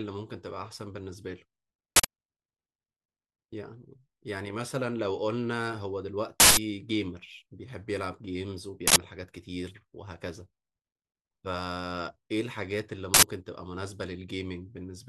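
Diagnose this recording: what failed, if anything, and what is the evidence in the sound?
Uninitialised buffer bursts at 1.96–2.05, 6.40–6.57, 8.88–8.96 and 13.14–13.23 s: blocks of stale driver memory played out as loud digital noise, about 85 ms long (171 ms at 6.40 s), fitting 4096-sample blocks (8192 samples at 6.40 s).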